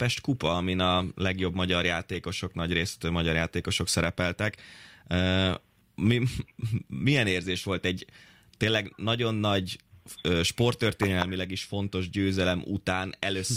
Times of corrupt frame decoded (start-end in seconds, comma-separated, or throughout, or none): 2.14-2.16